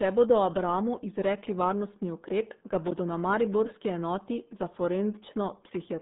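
From start to finish, the speech carries RealAudio 14.4 codec damage. The band runs only from 150 Hz to 3.7 kHz, with nothing above 3.8 kHz. Heavy coding leaves it muffled and gargly, which fits a starved 8 kbit/s dial-up stream.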